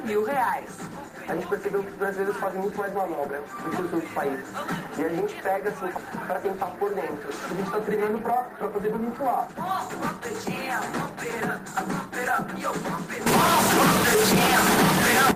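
A short stretch of audio with two problems. From 7.59 to 10.49 s there's a jitter buffer speed-up: it runs about 16% fast at unchanged pitch as pitch-period slices get dropped, roughly half a second trimmed overall. Then from 13.26 to 15.31 s it turns distorted with noise in the quiet bits, likely a stuck bit in the converter or data line.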